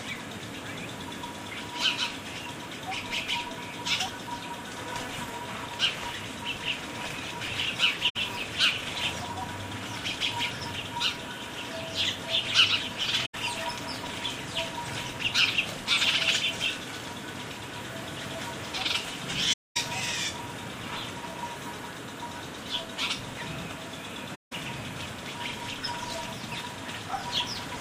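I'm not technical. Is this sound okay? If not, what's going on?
No. AAC frame loss with muting causes four short dropouts, at 8.09 to 8.16 s, 13.25 to 13.35 s, 19.53 to 19.77 s and 24.34 to 24.53 s. The sound arrived in small packed chunks, and some went missing. The player filled each gap with silence, fading out and back in, so you hear a soft-edged hole. The longest is about a quarter second, at 19.5 s.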